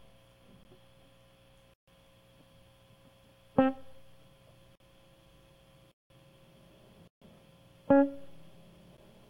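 Music cut by hard dropouts, ticks at 0.63 s and 8.97 s and short holes at 1.74–1.88, 4.75–4.80, 5.92–6.10 and 7.08–7.22 s: blocks of digital silence, likely where output buffers went unfilled and zeros played, the holes at 4.75 s and 5.92 s spanning 2048 and 8192 samples.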